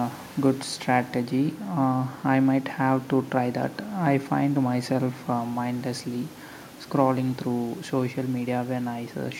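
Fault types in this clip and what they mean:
Nothing in this speech clip trips any alarm, so there are no fault types to list here.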